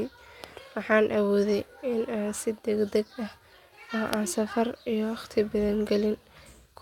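No technical faults can be heard anywhere in the speech. There are no events to place in time, so there is nothing to list.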